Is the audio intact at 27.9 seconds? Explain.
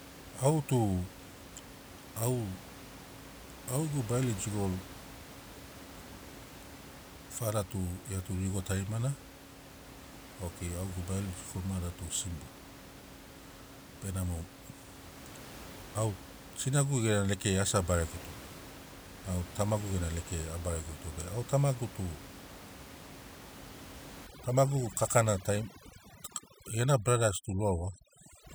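No, 27.9 s sits inside a stretch of overdone noise removal running from 24.27 s to the end, where aggressive denoising strips bands near the noise floor, leaving speech over twinkly near-silence.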